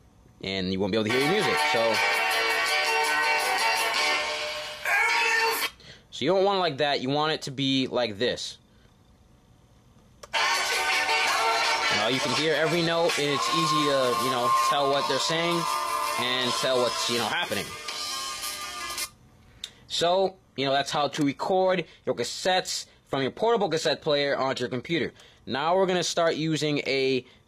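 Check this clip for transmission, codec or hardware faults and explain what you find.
One fault: an adaptive stream at a lower bitrate, from 13.1 s to 25.1 s. The connection slowed, so the player switched to a much leaner encoding of the same audio, consistent with a drop from around 96 kbit/s AAC to a roughly 20 kbit/s HE-AAC stream, then switched back. The change is abrupt in both directions with no gap. Across that stretch nothing remains above 14.9 kHz, the treble drops, and coding artefacts rise.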